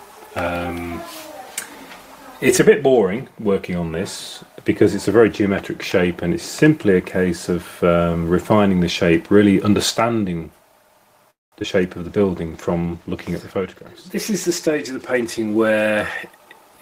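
At 11.30 s the sound stops moving and a call audio freeze takes over for about 0.22 s, until 11.53 s. The last sound is briefly carried on and then dies away, leaving roughly 0.18 s of near silence. When the audio resumes it picks up where it left off, so nothing is lost; the stretch is simply pushed later by about 0.22 s. The likely cause is packets stalling in transit until the jitter buffer ran dry.

Just after the restart come two instances of short concealed packet loss, at 11.60 s and 11.63 s. Each time about 10 ms of audio never reached the decoder, and the receiver bridged the hole by extending the preceding waveform before crossfading back into real data. With such short gaps, both are heard as momentary smears.

From 12.05 s to 16.22 s a call bitrate drop degrades the sound. The encoder was pushed from 32 kbps down to 17 kbps, staying at the low rate for about 3.45 s. At that rate Opus quantises more coarsely and trims the top of the spectrum, so the audio turns duller and takes on a rough, watery texture until the rate climbs back.

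Overlapping that, from 14.67 s to 16.78 s, a jitter buffer speed-up plays the audio at about 107% of normal pace. The receiver, holding more buffered audio than its target, repeatedly cut out short pitch-period-sized slices, around 150 ms in total, to pull the delay down. Pitch is unchanged, but the passage sounds slightly rushed, its timing compressed relative to the material before it.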